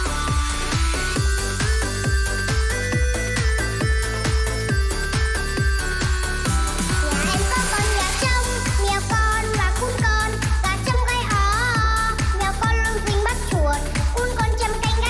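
No technical faults can be heard anywhere in this clip.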